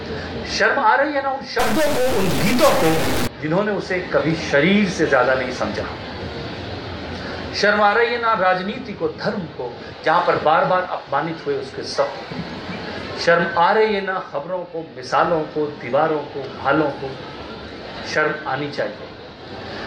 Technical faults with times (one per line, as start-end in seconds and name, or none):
1.59-3.27 stuck bit